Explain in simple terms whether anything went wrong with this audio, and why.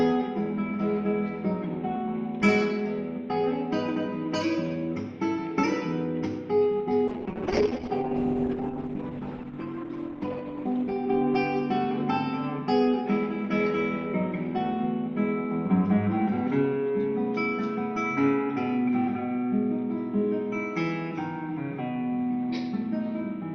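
A call bitrate drop runs from 7.09 to 11.97 s. The connection appeared to shrink, so the encoder squeezed the sound into far less data, coding it coarsely and cutting everything above 8 kHz. It turns rough and muffled, worst for almost 3 s.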